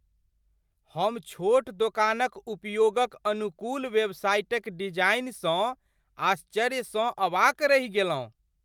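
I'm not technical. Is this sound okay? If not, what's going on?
Yes, this speech recording sounds okay, with no technical problems to be heard. There's nothing here that needs fixing.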